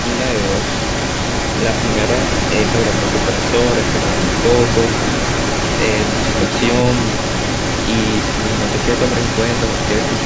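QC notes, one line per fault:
Throughout, echo leak: a delayed copy of the speech trails 333 ms behind, about 5 dB quieter, likely a loudspeaker return the echo canceller missed.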